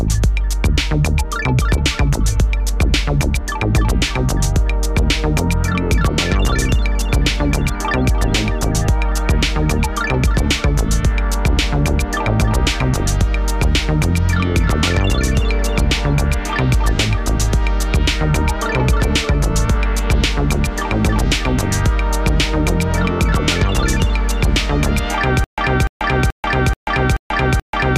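A playback stall, likely in the player or stream, causes a stutter with silent gaps from 25.44 s to the end: a 295 ms fragment repeats six times, separated by 137 ms of digital silence.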